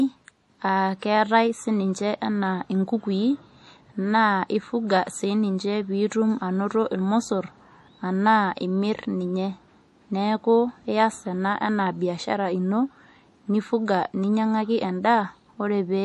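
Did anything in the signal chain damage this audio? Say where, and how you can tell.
Yes. The speech has a plainly audible watery, swirling quality throughout, and nothing sounds above 11.5 kHz. That is likely MP3 compression at the codec stage. Short of bits, the encoder cut the treble and dropped weak frequency lines frame by frame, consistent with roughly 48 kbps.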